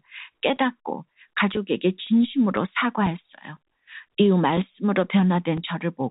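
At 1.54 s there is a brief packet loss with pitch repetition: about 10 ms of audio, likely a single dropped packet, was replaced by repeating the last pitch period. It sounds like a tiny held buzz rather than a silent gap or click.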